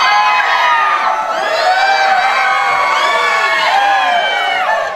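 No technical faults are audible.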